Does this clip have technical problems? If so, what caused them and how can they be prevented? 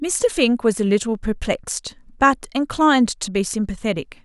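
No, no technical problems heard.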